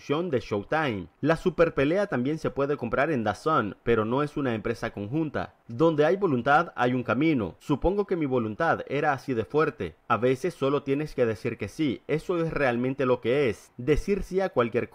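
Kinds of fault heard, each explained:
Nothing stood out on listening that would point to a technical fault.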